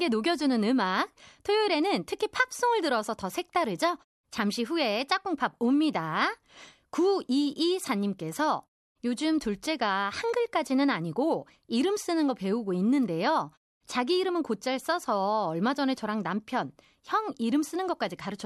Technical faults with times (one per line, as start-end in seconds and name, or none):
none